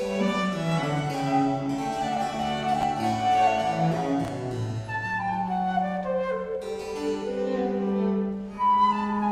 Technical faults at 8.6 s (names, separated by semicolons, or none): chunks out of order